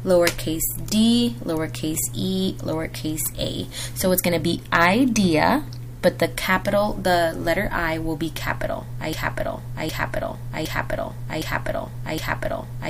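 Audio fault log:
9.13–12.9 s, broken-record loop: a 0.76 s fragment repeats exactly five times, back to back, to the end, likely from a stalled player or stream.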